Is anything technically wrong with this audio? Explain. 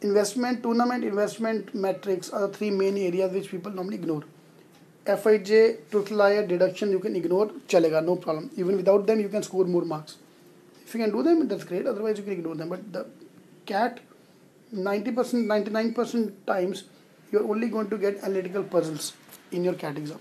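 No, no technical faults here.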